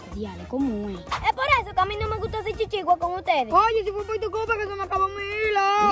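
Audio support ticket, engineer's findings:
No faults found on listening: no dropouts, clicks, distortion, level jumps or timing irregularities could be heard at any point in the signal.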